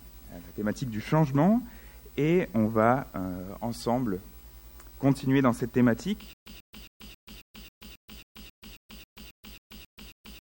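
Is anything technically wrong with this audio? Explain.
Yes. A stutter with silent gaps begins at 6.33 s and continues to the end. Playback likely stalled, and at each retry the same 139.5 ms fragment played again before the output ran dry, leaving about 131 ms of digital silence. The cycle repeats every 270 ms, fifteen times, so the sound becomes a rapid, mechanical stammer of one identical burst. Whatever should have played after 6.33 s is missing.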